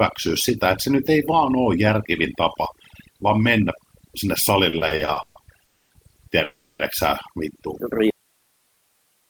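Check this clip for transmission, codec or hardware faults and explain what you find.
Four kinds of fault can be heard, starting with overdone noise removal across the whole speech clip and then a run of timing and signal-loss problems in the second half.

Overdone noise removal runs from start to finish. The background sinks to an unnatural near-silence dotted with twinkling specks. A noise reducer set far too aggressively is switching individual frequency bands down or off whenever they sit close to its noise estimate. The quieter components of the voice fall into that range and are stripped away along with the noise.

Repeated stalls (stutter) begin at 4.69 s, right after "tapa vaan mennä sinne", and last until 5.38 s. The speech hiccups seven times, each time stretching the last sound before moving on. The longest hold is 130 ms, about 300 ms is filled in total, and 43% of that span is concealment. 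Packets were arriving late or too slowly, so the jitter buffer kept draining and the receiver bridged each gap. Nothing is lost, but delivery drags.

Call audio freezes occur at 5.65 to 5.93 s and 6.44 to 6.82 s. In the first, about 250 ms is bridged by a held sound that fades out, leaving roughly 200 ms of silence before speech resumes. In the second, about 350 ms is covered by a sustained continuation that never reaches silence. The likely cause is held-up packets emptying the jitter buffer. Playback picks up exactly where it stopped, so a delay is inserted and nothing is missing.

An audio dropout to a faint residue starts abruptly at 8.10 s and lasts to the end. The speech cuts off mid-flow, with no fade, leaving only hiss roughly 45 dB below the speech. The signal was likely lost upstream while the chain after the break stayed live, so its own noise floor is all that continues.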